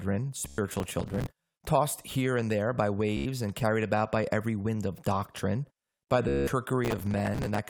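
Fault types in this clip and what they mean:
Bluetooth stutter: lost or late wireless packets made the receiver replay its last slice until fresh data arrived, giving buzzing repeats at 0.48 s, 3.17 s (after "here and there by") and 6.28 s, lasting 0.10, 0.09 and 0.19 s. The waveform tiles one short shape; the spectrogram shows evenly spaced vertical stripes.
processor overload crackle: the processor missed dozens of deadlines in a row, each slot of roughly 5 ms filled with old audio, causing gritty tearing from 0.69 to 1.27 s, just before "tossed here and there", and from 6.85 to 7.59 s. The waveform shows hard-edged jumps; the spectrogram shows dense broadband clicks.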